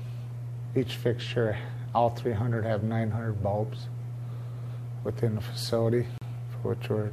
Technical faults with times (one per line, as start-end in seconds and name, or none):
6.18-6.22 gap between stream segments